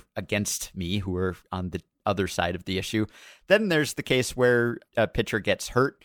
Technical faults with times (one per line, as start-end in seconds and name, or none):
none